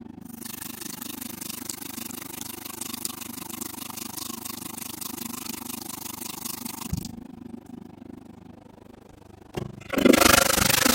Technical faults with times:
0.00-10.94 overlap-add ripple

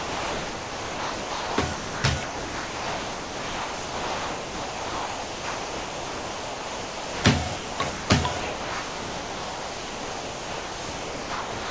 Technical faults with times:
0.00-7.24 sound dropped by the voice detector
7.56-8.10 sound dropped by the voice detector
8.40-11.70 sound dropped by the voice detector

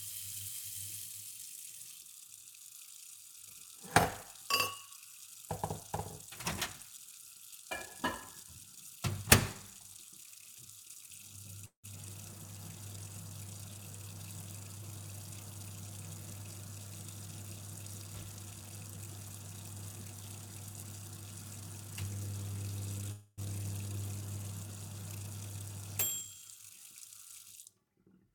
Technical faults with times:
11.65-11.86 call audio freeze
14.77-14.83 jitter buffer speed-up
18.53-19.33 jitter buffer speed-up
23.11-23.40 call audio freeze
25.43-27.15 jitter buffer speed-up

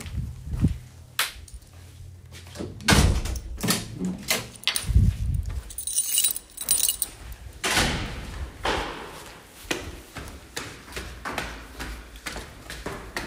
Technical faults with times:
none

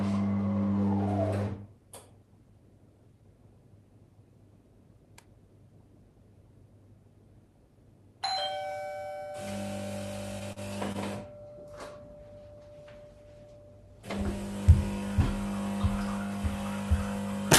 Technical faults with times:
10.52-10.59 short stall from a late packet
10.92-10.97 short stall from a late packet
13.86-14.14 jitter buffer speed-up

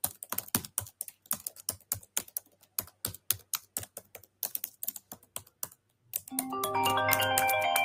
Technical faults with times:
0.00-7.84 noise suppressor applied to music or sounds
0.68-1.30 sound cut by the noise suppressor
1.57-4.42 sound cut by the noise suppressor
4.99-6.12 sound cut by the noise suppressor

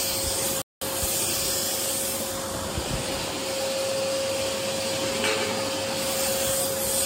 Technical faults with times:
0.62-0.82 Bluetooth stall

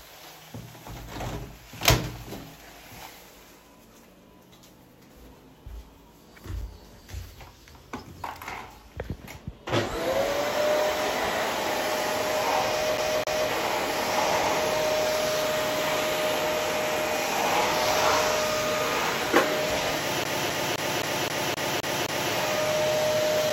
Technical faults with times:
6.61 block of digital silence
12.97-13.50 CD stuck on one turn
20.24-22.32 CD stuck on one turn
23.50 block of digital silence

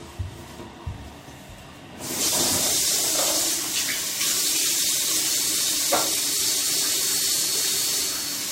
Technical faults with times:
5.20-8.52 feedback whistle

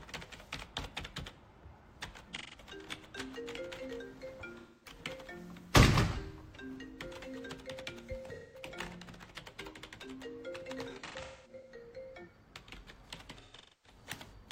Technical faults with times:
2.36-2.59 AAC frame loss with concealment
4.58-4.98 AAC frame loss with concealment
8.34-8.65 AAC frame loss with concealment
10.89-11.72 AAC frame loss with concealment
13.41-13.98 AAC frame loss with concealment

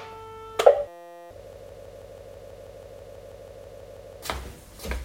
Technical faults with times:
0.88-1.31 system hang loop
1.53-4.22 broken-record loop

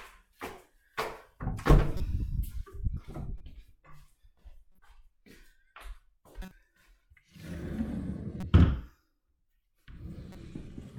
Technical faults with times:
1.97-2.00 corrupt frame decoded
3.38-3.41 corrupt frame decoded
4.74-4.79 corrupt frame decoded
6.42-6.51 corrupt frame decoded
8.40-8.43 corrupt frame decoded
10.32-10.35 corrupt frame decoded

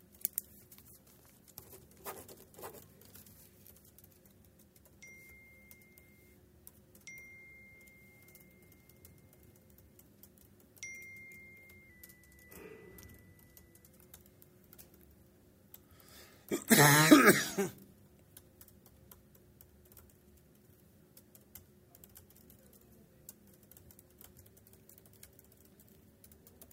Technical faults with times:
11.90-13.87 drift correction step
24.46-26.73 drift correction step

